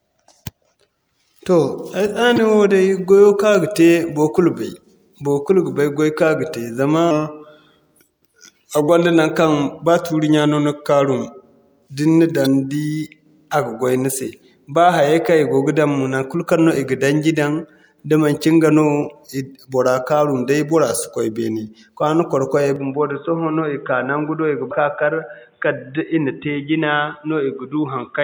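At 2.36 to 2.38 s there is a short glitch: damaged data in a compressed stream. A run of corrupt bytes left the decoder unable to read the frames there. It lost sync and skipped forward to the next valid frame header, so the sound glitches briefly. The same fault returns at 12.42 to 12.47 s, a longer blip of the same kind.

From 7.11 to 8.89 s a section plays at the wrong speed, slowed to 0.893 of normal. Because speed and pitch move together, the audio drops by roughly two semitones and drags, then snaps back to normal at the end of the section. The cause is likely playback or editing against a mismatched clock, which stretched this stretch of audio in time.

At 22.76 s the input switches to a poorer device, likely a headset or a second microphone, and stays that way to the end. The band is narrower afterwards, so the sound turns dull and boxy. The change is instantaneous, with no gap and no shift in level. 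The new path brings its own faint noise floor, roughly 45 dB below the signal. Inside this narrowed section, at 24.68 to 24.72 s, a third burst of damaged compressed data produces another brief glitch.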